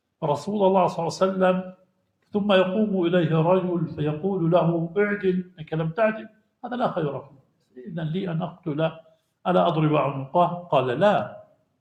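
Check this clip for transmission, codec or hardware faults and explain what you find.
Sound cut by the noise suppressor occurs three times: 5.44 to 5.65 s, 6.25 to 6.42 s, and 7.29 to 7.5 s. The suppressor mistook these sounds for noise. It pulled them down by about 12 dB at most. Each dip lasts roughly a fifth of a second or less.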